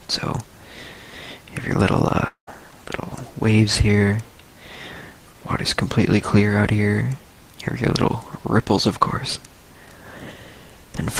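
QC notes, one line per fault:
2.27–2.49 s, long network dropout: the sound cuts out and the last bit gets carried on as a fading buzz or hiss for about 196 ms, including 100 ms of silence. When it resumes, 200 ms is simply gone, likely because packets never arrived.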